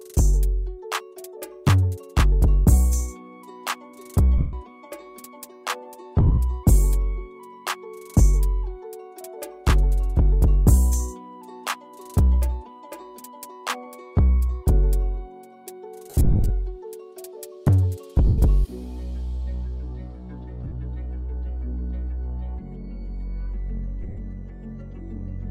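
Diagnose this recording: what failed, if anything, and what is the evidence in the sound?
Lost LE Audio frames on the Bluetooth link, concealed by the LC3 decoder. Gaps fall at 4.38 s (150 ms), 6.20 s (140 ms lost in bursts over 180 ms), 16.10 s (250 ms scattered over 400 ms), 18.27 s (110 ms), 20.64 s (70 ms over 80 ms) and 24.03 s (100 ms over 140 ms). The decoder refills each gap from the last spectrum with randomised signs, so tones smear into noisy hiss that fades instead of cutting to silence or clicking. A buffer underrun would do the latter. Light lossy compression sits beneath.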